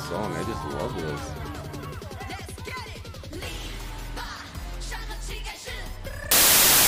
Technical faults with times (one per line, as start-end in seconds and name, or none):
6.31-6.87 samples built from the wrong bytes